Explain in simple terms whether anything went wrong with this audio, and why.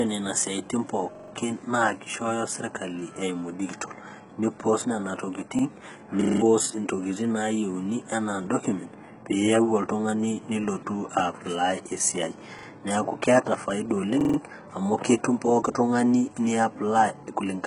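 Throughout, the speech sounds dull and gritty, with nothing above 11 kHz and a rough, metallic edge on s sounds. This is HE-AAC compression, likely from a low-quality stream that keeps only the lower frequencies and fakes the treble by copying them upward.

At 1.15–1.32 s, 5.59–5.63 s, 12.59–12.67 s and 14.21–14.38 s there is a quick stutter, where a tiny slice of about 43 ms plays two or more times in a row. This is a repeated buffer. Fresh audio arrived late, so the player replayed the last chunk, which fits a 2048-sample buffer.

From 6.21 to 6.41 s a 40 ms piece loops five times, making a brief buzzing rattle at 25 repeats per second, and about a fifth of a second of speech is lost. This is a system hang loop. The computer briefly froze while the sound hardware kept cycling the same audio.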